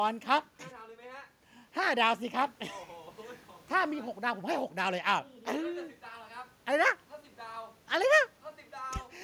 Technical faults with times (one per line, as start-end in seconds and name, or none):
none